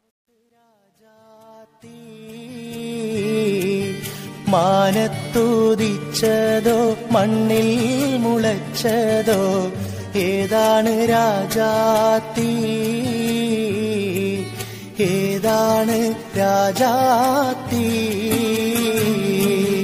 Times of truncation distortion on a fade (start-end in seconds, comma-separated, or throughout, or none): 0.00-3.40